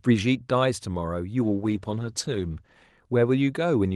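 Speech carried over an Opus call path, which tops out near 12 kHz. From 1.42 to 2.79 s, a call bitrate drop takes hold. The sound turns rough and muffled, with the top end trimmed. That fits the encoder falling from about 40 to 17 kbps for roughly 1.3 s before recovering.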